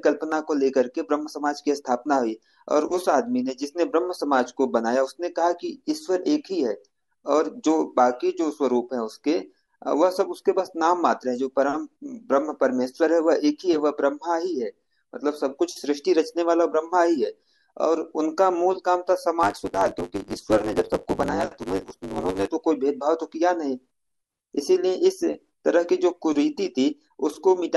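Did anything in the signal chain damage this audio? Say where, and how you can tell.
Yes. Between two buffer stages, from 19.42 to 22.48 s, there is a block size mismatch (truncated). The writing stage hands over larger blocks than the reading stage takes, so the tail of each block is discarded. Those periodic cuts produce a buzz at 100 Hz, the block rate, which fits 512-sample blocks being written. Because part of every block is lost, the speech runs about 1.16 times fast while keeping its timbre.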